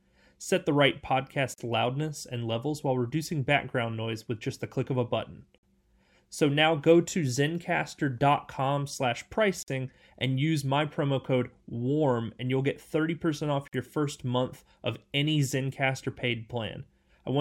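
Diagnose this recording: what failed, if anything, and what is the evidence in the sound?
Gaps at joins of encoded pieces open in the continuous speech at 1.54–1.58 s (about 41 ms), 5.58–5.63 s, 9.63–9.68 s and 13.68–13.73 s (about 49 ms each), repeating every 4 s. This is a codec-stage fault: the speech was encoded in separate segments and concatenated untrimmed, so each join keeps one run's padded final frame and the next run's start-up delay. The silences have smeared edges, and the speech resumes exactly where it broke off.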